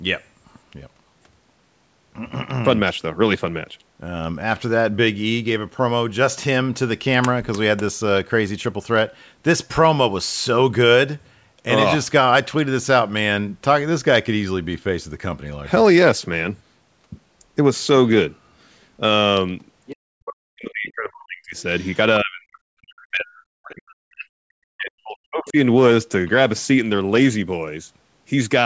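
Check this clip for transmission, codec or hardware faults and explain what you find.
Two echo-related faults appear in the second half of the speech, both pointing to a call's echo canceller struggling while the far end played through a loudspeaker.

Other side's voice leaking through, at 19.86 to 19.96 s and 21.80 to 21.96 s: the echo canceller likely failed to subtract all of the loudspeaker sound picked up by the microphone. Brief scraps of a second voice slip through, about 20 dB and then about 30 dB below the talker.

Speech suppressed in double talk, from 19.97 to 21.56 s and from 22.21 to 25.57 s: with both sides talking at once, the canceller likely could not tell the talker from the echo and attenuated everything. The talker's voice sinks by up to roughly 40 dB.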